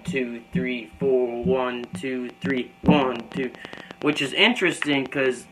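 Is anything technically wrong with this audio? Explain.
Yes. From 1.84 s to 5.27 s there is a train of clicks: around thirty near-identical pulses at about 7.6 per second, spaced unevenly, each peaking around 10 dB above the surrounding sound. The likely cause is interference from nearby equipment or a faulty connection or power supply, adding a pulse outside the audio itself. It sounds like ticking over the sound and in its gaps. Unlike random crackle, these clicks share one shape and recur several times a second.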